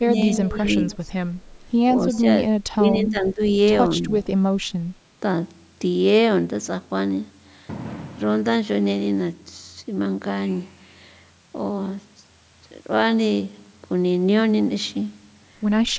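Speech suppressed in double talk runs from 0.0 to 0.63 s: the voice dips by up to about 15 dB for roughly 0.4 s in total, most likely because the echo canceller heard the far side talking at the same moment and could not tell its own talker from loudspeaker echo, so it turned everything down. The same pumping returns at 1.08 to 1.12 s as a shallow dip of about 5 dB, then at 2.68 to 3.41 s and 4.57 to 4.82 s, where the level falls by around 20 dB and the voice thins or breaks into pieces.

Echo leak appears at 0.91 to 0.97 s and again at 2.14 to 2.19 s as a faint, 185 ms delayed copy of the voice, sitting about 25 to 30 dB below the speech. This is likely a loudspeaker on one end whose microphone pickup was not fully cancelled, so brief scraps were sent back. The call's microphone processing is also audible, with no content above 8 kHz and the lowest bass trimmed, as it normally is.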